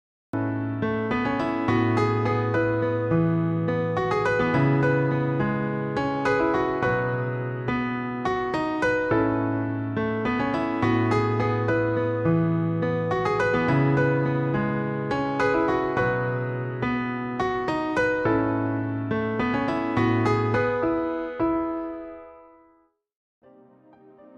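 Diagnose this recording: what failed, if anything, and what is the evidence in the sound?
Cut-off start, at the recording or capture-start stage. The first 0.33 s is digital silence, and the sound then begins abruptly in mid-event at 0.33 s with no natural attack or fade-in. The capture began late: the recorder or stream was not writing samples when the source was already active, so the opening was never recorded. On a waveform, a dead-flat line jumps straight to the ongoing signal. On a spectrogram, a blank region ends in a sharp vertical edge at 0.33 s.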